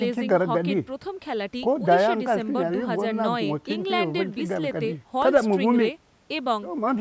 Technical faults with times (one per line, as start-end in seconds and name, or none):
none